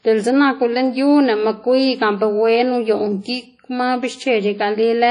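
Speech carries plainly audible WMA compression damage throughout: the sound rings and smears, with a washy hiss that swells and fades along with the signal. The likely cause is a transform codec run with long blocks, which spreads quantisation noise over tens of milliseconds, at a low bitrate that fits about 32 kbps. On a spectrogram everything stops at a hard ceiling near 10.1 kHz, with speckled gaps where weak components were zeroed and smearing around onsets.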